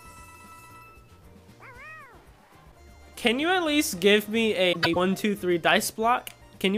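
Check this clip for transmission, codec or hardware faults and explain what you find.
One transmission fault: frames out of order, 4.72 to 4.96 s. Two adjacent blocks of about 104 ms, which fits four frames each, swap places, giving a garbled flutter. A spectrogram shows abrupt vertical seams there.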